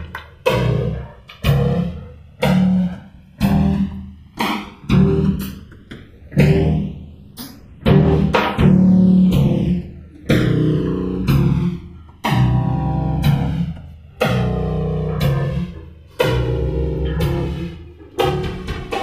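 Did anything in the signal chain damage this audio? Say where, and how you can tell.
Yes. The channels drift apart throughout the clip. The left and right signals were captured by converters running on separate, unsynchronised clocks, and the mismatch looks to be a few hundred parts per million. The delay between the channels therefore grows steadily and reaches a few milliseconds by the end. When the two are summed, the comb-filter notches sweep slowly across the spectrum, which you hear as a gradual flanging that develops over the whole clip.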